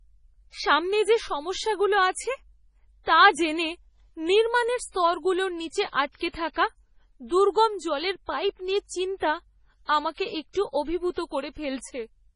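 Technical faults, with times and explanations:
Throughout, MP3 compression: the encoder was likely short of bits, with damage this heavy fitting a rate near 24 kbps, so it cut everything above 10.5 kHz and toggled weak frequency lines between frames, leaving the speech dull and watery, with metallic chirps on s sounds.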